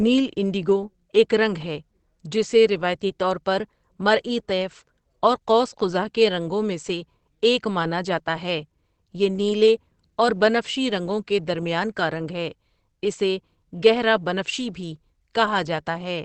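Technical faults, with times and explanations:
Throughout, Opus compression: muffled, hoarse speech, likely Opus's SILK mode at a rate fitting 16 kbps; the spectrogram shows nothing above 8.4 kHz.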